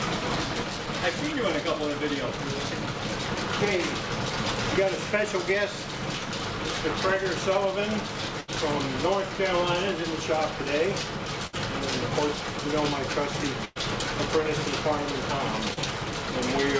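Runs of packets failed to reach the receiver in time, causing a burst of packet loss at 8.41 to 8.51 s, 11.47 to 11.55 s and 13.65 to 13.78 s. Each time the receiver stretched the last sound it had and turned it down, producing about 72 ms, 58 ms and 107 ms of synthetic fill respectively. You hear each as a held buzz or fading hiss. The audio then jumps ahead, with about 80 ms, 60 ms and 100 ms of real material simply gone.

At 15.74 to 15.79 s a smaller gap of about 40 ms gives short concealed packet loss. The decoder patched it with roughly 31 ms of extrapolated sound before blending back into the real signal, which comes across as a brief smear or wobble. Throughout, the call codec's band limit leaves nothing above 8 kHz, which fits G.722 at 64 kbps.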